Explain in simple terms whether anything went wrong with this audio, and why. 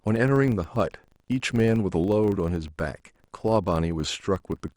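A buzz runs under the speech from start to finish. The cause is a filter restarted on every block. Every 40 ms it forgets its past and starts fresh, making a tiny click. Twenty-five clicks a second merge into a buzz that swells with the speech.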